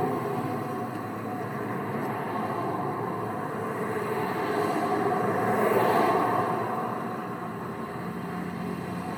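No technical faults are audible anywhere in this recording of sounds.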